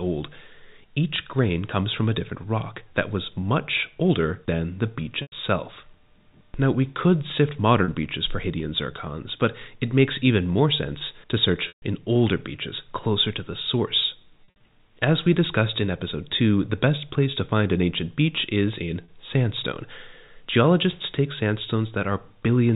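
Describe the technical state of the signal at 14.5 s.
Packet loss with pitch repetition from 14.44 to 14.6 s, after "closer to the source": about 120 ms dropped in gaps up to 60 ms, bridged by repeating the last pitch period, giving a held, buzzy tone.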